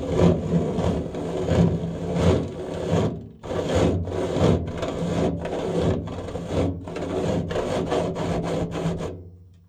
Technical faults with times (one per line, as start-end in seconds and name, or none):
none